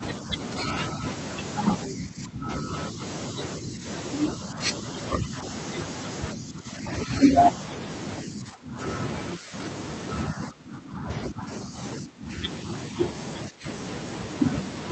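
From 0.0 s to 13.65 s the speech repeatedly dips, thins out at the top and breaks into fragments, about five seconds in all, sinking by roughly 15 dB at its deepest. This is likely speech suppressed in double talk: the echo canceller mistook overlapping far-end sound for its own echo and turned the talker down with it. All of this comes over a call path band-limited at 8 kHz.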